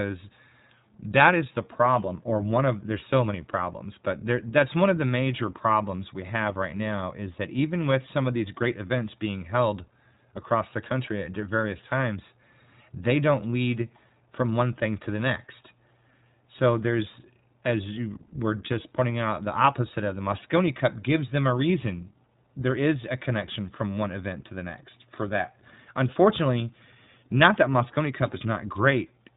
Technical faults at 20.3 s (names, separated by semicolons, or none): iLBC codec